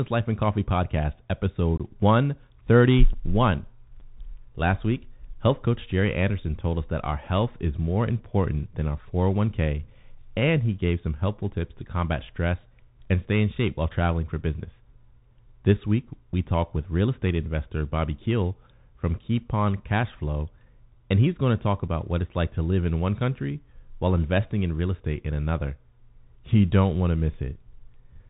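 Throughout, the speech sounds boxed-in and telephone-like, with scratchy s sounds, rough distortion on loud bright syllables and a granular hiss underneath. That is the Bluetooth CVSD headset codec, which fits a 64 kbps link: its one-bit adaptive steps cap the band near 4 kHz and cannot keep up with sharp, loud changes.

Between 1.77 and 1.81 s the sound drops out abruptly for about 22.5 ms, with abrupt edges and a momentarily quieter return. A shorter 7.5 ms hole follows at 3.13 s, and another at 21.88 s, between "he's going to talk" and "what it's like to". This is unconcealed Bluetooth headset packet loss. The first gap points to a few consecutive voice packets going missing between headset and phone, and the later two to a single packet each. Nothing was patched into the holes.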